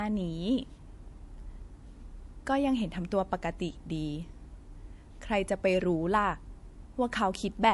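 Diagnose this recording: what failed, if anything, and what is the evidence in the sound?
Codec stage, likely MP3 compression: throughout the speech the treble stops at 11.3 kHz, a flat spectrogram ceiling, with flickering, watery high-frequency patches from starved bits.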